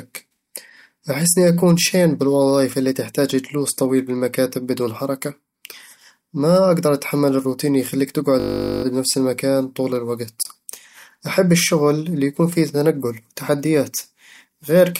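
From 8.4 to 8.84 s, right after "أتحمل الروتين اللي يخليك", a steady 50 Hz buzz replaces the speech until "بنفس المكان طول". This is a system hang loop: a frozen driver left the hardware replaying one 20 ms buffer 22 times.

At 10.43 to 10.45 s, just after "بنفس المكان طول", a 25 ms hole with smeared edges opens. This is a gap at a join of encoded pieces, caused by untrimmed encoder delay and padding.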